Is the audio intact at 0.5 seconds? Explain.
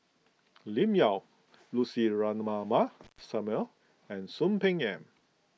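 Yes, the audio is intact at 0.5 seconds, with no fault at that moment.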